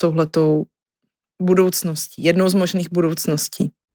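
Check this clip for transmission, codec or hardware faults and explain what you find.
Nothing is wrong with the signal: the speech has passed through Opus voice compression at 24 kbps in hybrid mode with the full band kept, so its content still reaches up to 20.4 kHz and the coding leaves only a light mark.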